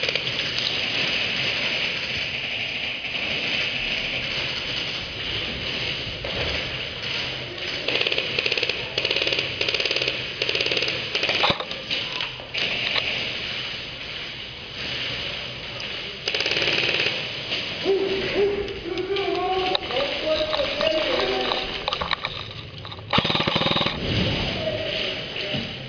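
No technical faults are audible anywhere in the recording.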